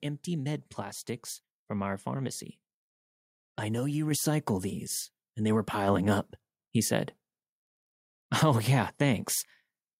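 A speech recording with two microphone volume stepped up events, at 4.11 s and 5.88 s. At each point the whole signal, voice and background alike, jumps in level at once, by about 4 dB and then about 3 dB, and stays there. That pattern points to call software judging the microphone too quiet and raising the device's input gain in discrete steps, rather than to any change in how the person was speaking.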